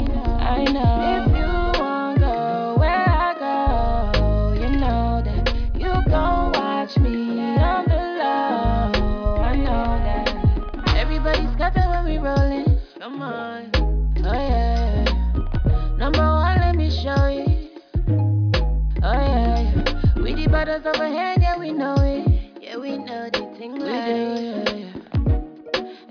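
Nothing is technically wrong with this audio.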